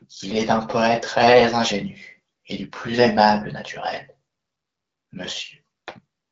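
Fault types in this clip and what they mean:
The speech passes through an AMR wideband (HD Voice) link at 12.65 kbit/s, which leaves it clear, with content stopping at about 7.6 kHz and the top of that band filled with shaped noise rather than fully coded detail.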